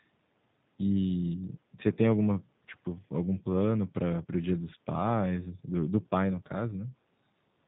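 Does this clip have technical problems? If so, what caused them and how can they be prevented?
Yes. Throughout this speech clip the sound has the rough, slightly synthetic texture of G.729 codec damage, and the damage is plainly audible. The codec rebuilds each 10 ms frame from a vocal tract filter, a pitch predictor and a handful of pulses, so fine detail is replaced by an approximation. The bandwidth fits an 8 kbit/s G.729A stream. On a spectrogram, energy stops at a flat ceiling near 4 kHz with nothing above it, and the harmonics look smeared. To prevent this, carry the call over a wideband codec such as Opus or G.722 instead of G.729.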